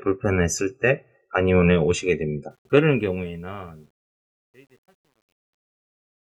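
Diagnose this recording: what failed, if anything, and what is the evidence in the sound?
Truncation distortion on the fade-out, from a gain or sample-format stage that rounds without dither, at what sounds like about 11 bits. From 2.51 s the tail turns gritty, and from 3.63 s to 6.27 s it is at its worst. The waveform shows stair-steps, and the spectrogram shows broadband hash above the fading material.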